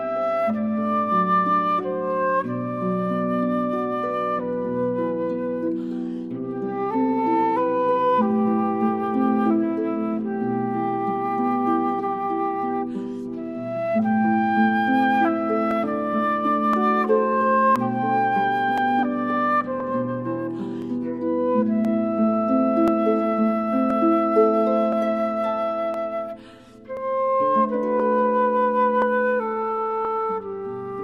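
From 15.71 s to 30.05 s, periodic USB or driver dropouts skip under a millisecond every 1.02 s: regular ticks, waveform splices, vertical spectrogram lines.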